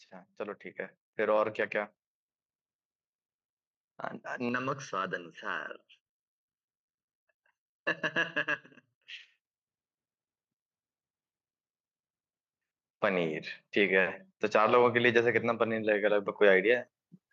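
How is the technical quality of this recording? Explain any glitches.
Two glitches stand out in this speech recording, one a tonal coloration and one a level change.

Channel delay (comb filtering), 4.49 to 9.08 s: one channel runs late by about 0.7 ms, and summing to mono cancels shared content at evenly spaced frequencies, the first near 700 Hz, leaving the speech hollow and phasey.

Automatic gain rising, 13.01 to 16.92 s: the gain control judged the input too quiet and raised its gain by about 7 dB over nearly four seconds, so the speech and background noise swell together.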